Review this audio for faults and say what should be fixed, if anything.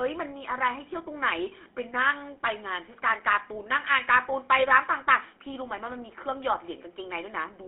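The whole clip has been through a GSM full-rate codec. The speech is buzzy and gravelly because the excitation is rebuilt from sparse, regularly spaced pulses, which fits 13 kbps. The band is squeezed to roughly 250 Hz to 3.4 kHz. To prevent it, record or route the audio over a wideband path instead of a GSM phone link.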